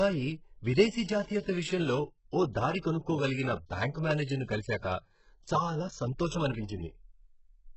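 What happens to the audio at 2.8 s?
Pre-echo appears from 2.80 to 2.84 s, between "విషయంలో ఓ దారి" and "కనుక్కోగలిగిన బ్యాంక్ మేనేజర్ను". The codec spread quantisation noise across its whole block, so a short hiss of about 36 ms leaks into the silence before the next attack and softens its onset.

Underneath, the speech is heavily compressed, likely by HE-AAC at a very low bitrate, around 8 kbps. Nothing is heard above 8 kHz, and the upper band is rebuilt from copied lower bands, which makes the s sounds gritty and metallic.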